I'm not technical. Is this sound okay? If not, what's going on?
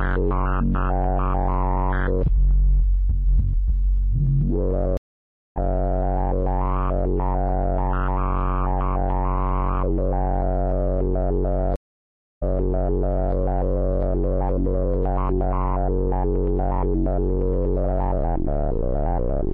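No. There are two stream reconnects, where the connection dropped and the player restarted. At 4.97 s the sound stops for 0.59 s, then resumes a bit further on. At 11.76 s it stops for 0.66 s, then replays the previous 0.93 s.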